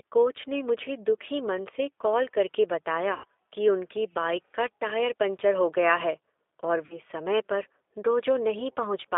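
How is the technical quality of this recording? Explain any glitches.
The quality is limited by a low-bitrate phone codec throughout, with two brief dropouts.

The G.729 codec runs for the whole clip at 8 kbit/s. The band sits between 300 Hz and 3.6 kHz. Speech is rebuilt from a vocal tract model and a few pulses per frame. It sounds thin, rough and plainly synthetic.

VoIP packet loss concealed by the speech codec occurs twice. From 3.14 to 3.25 s, after "मन से कॉल करके", about 100 ms goes missing, which fits five lost 20 ms packets. From 6.86 to 6.99 s, after "है और", about 40 ms is lost. Each time the decoder stretches the last sound into a buzzy tone or coloured noise that fades. The audio stays weak briefly before "कि उनकी बाइक का" and "समय पर".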